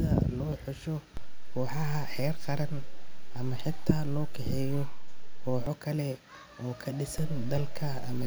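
At 1.17 s the zero line of the speech shifts abruptly, a DC step of about -27 dBFS that holds until 5.67 s and then drops back, giving a low thump at each edge while the speech continues unaltered. A second DC step, about -28 dBFS, arrives at 7.18 s and stays to the end of the clip. The offset points to an input or converter path whose baseline jumped rather than drifted.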